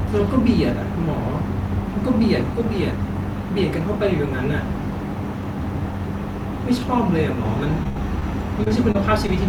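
At 7.83–7.87 s a short concealed packet loss leaves a brief smear in the speech: about 20 ms of audio never arrived, and the decoder covered it by extending the preceding sound before blending back in. The same brief smear recurs at 8.19–8.23 s.

Between them, at 7.89–7.97 s, a burst of packet loss drops roughly 60 ms. The receiver holds the last sound as a fading buzz or hiss, then resumes later, so a slice of speech is simply absent.

From 8.63 to 9.30 s, repeated packet loss produces a choppy, robotic stretch. Four separate gaps, the longest 28 ms, each get patched by continuing the prior sound, and about 13% of that span is synthesized filler rather than real audio.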